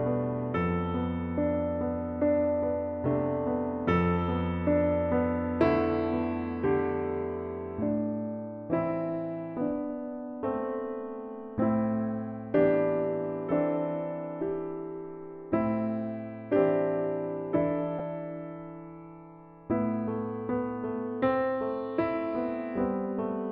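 At 17.99 s there is a brief dropout from lost LE Audio frames. About 10 ms of audio failed to arrive, which fits a single missing LC3 frame. The decoder filled the gap by repeating the previous frame's spectrum with randomised signs, so the tonal detail turns into a short noisy smear rather than clean silence. On a spectrogram it appears as a thin vertical band of diffuse energy where harmonic lines briefly blur. The waveform shows a tiny stretch of irregular, noise-like samples.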